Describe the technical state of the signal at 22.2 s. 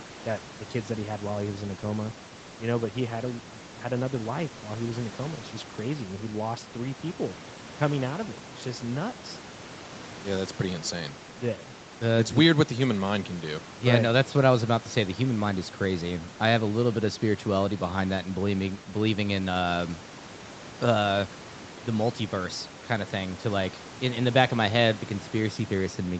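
At 22.2 s the speech is intact, carrying only the ordinary character of a call path, with band-limited audio that stops at about 8 kHz and room noise sitting about 19 dB below the speech.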